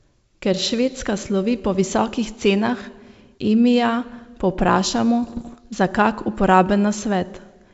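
From 5.24 to 5.57 s the G.722 wideband signal is hit by bit errors on an ADPCM link, with a bit error rate of roughly one or two percent. Each flipped bit upsets the decoder's adaptive step size and predictor, so the damage rings on briefly as pops and rough bursts with short jumps in level. Packet loss would leave gaps or smoothed repeats, but here the sound keeps running and is roughened rather than silenced.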